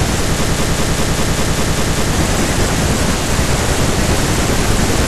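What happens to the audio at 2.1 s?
At 2.1 s you're right at the tail of a broken-record loop that started at 0.44 s and lets go at about 2.13 s. A roughly 0.2 s scrap of speech repeats nine times back to back, likely because playback stalled and kept resending its last fragment, so the real audio there is gone.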